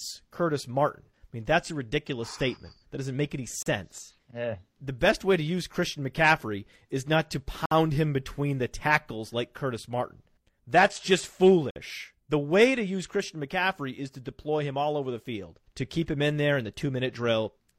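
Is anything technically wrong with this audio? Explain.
Yes. Gaps between stream segments appear at 3.63 s after "doesn't make any", at 7.66 s after "is not to" and before "him between the tackles", and at 11.71 s. Each is a hard-edged silence of about 36, 57 and 53 ms, spaced roughly 4 s apart, which fits mismatched segment timestamps padded with silence. Unlike a dropout, nothing is lost: the speech resumes exactly where it stopped.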